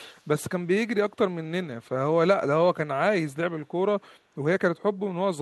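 A speech recording with a brief echo leak, most likely from a far end playing the call over a loudspeaker whose echo canceller let part of the microphone pickup slip through and return. Between 0.17 and 0.24 s a faint, delayed copy of the speech surfaces about 252 ms behind the original, sitting roughly 40 dB below it.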